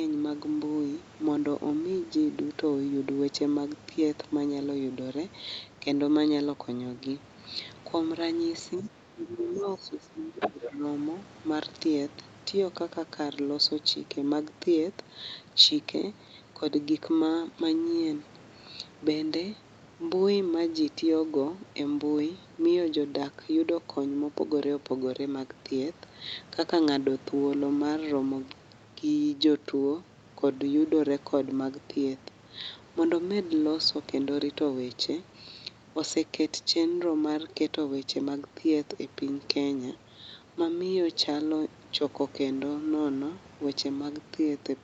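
Speech suppressed in double talk hits this speech recording twice: a shallow dip from 8.81 to 8.92 s and a deeper loss from 9.15 to 10.84 s, where the talker drops by up to about 15 dB. The likely cause is an echo canceller ducking both talkers rather than a network dropout. The other side's voice leaking through is faint from 9.44 to 9.77 s and then roughly as loud as the talker from 10.4 to 10.7 s. This is a second voice, distinct from a room reflection of the talker, and the echo canceller likely failed to remove it. The sound has no content above 8 kHz throughout, which fits a wideband call codec.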